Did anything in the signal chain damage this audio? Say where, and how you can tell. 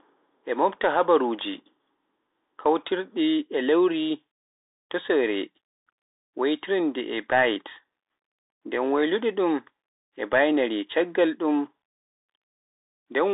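Yes, at the codec: a Bluetooth CVSD headset codec runs throughout. Nothing passes above 3.8 kHz, and the band sits near 300 Hz to 3.7 kHz. Unlike a plain telephone band-limit, there's granular hiss under the speech and scratchy s sounds, where the one-bit delta steps can't keep up, which fits a 64 kbps stream.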